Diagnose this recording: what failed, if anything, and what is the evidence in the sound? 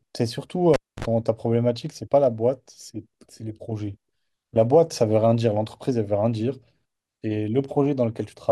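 A cable pulled and plugged in at the analogue wiring stage, between 0.74 and 1.05 s. A pop opens about 267 ms of near silence. Then comes 55 ms of 50 Hz mains buzz as the plug tip touches first, and a second pop on reconnection. That buzz and the paired pops separate it from a digital dropout.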